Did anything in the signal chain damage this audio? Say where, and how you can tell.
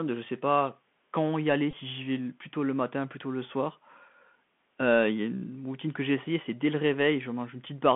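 Yes. The codec stage is the main culprit. The whole clip carries Bluetooth CVSD headset codec damage, and it is plainly audible. The speech sits in a telephone band of about 150 Hz to 3.4 kHz, with nothing above. S sounds are scratchy. A granular hiss runs under the speech. Loud, bright passages distort because the one-bit delta encoder's adaptive step cannot keep up. The sound fits a 64 kbps CVSD link.

The wireless link between headset and phone also failed briefly. A Bluetooth headset packet repeated from 1.71 to 1.74 s, about 18.8 ms in all. The decoder replayed the last good packet's bits rather than going silent. Each packet spans 3.75 ms, so the repeats form a short buzz near 267 Hz. The length fits about five lost packets in a row. Normal speech resumes once good packets arrive again.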